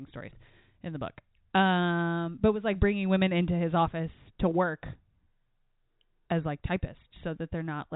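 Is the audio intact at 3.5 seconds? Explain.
Yes, at 3.5 seconds the speech is intact, with no dropout, click or distortion at that moment, only the narrow telephone band of G.711 coding passing the sound as it should.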